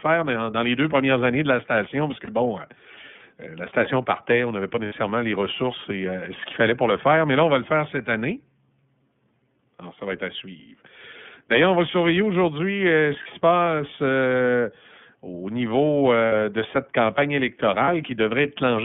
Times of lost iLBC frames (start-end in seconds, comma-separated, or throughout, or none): 2.24-2.29, 4.86-4.93, 13.23-13.27, 16.26-16.32, 17.84-17.89